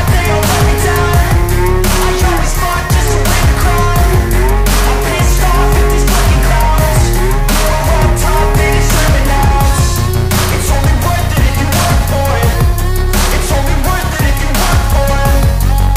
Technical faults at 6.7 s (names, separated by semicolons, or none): none